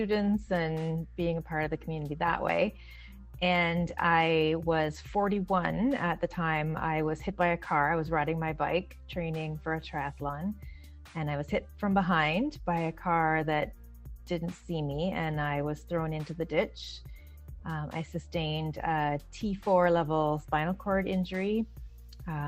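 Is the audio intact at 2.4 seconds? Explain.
Yes, at 2.4 seconds the audio is intact, with no dropout, click, distortion or other fault to be heard at that moment.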